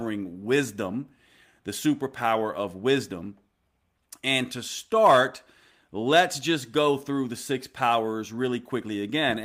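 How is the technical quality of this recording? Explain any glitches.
No glitches or technical faults can be heard anywhere in the speech recording.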